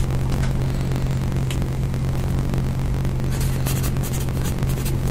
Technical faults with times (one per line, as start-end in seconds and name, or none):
0.00-5.10 block size mismatch (truncated)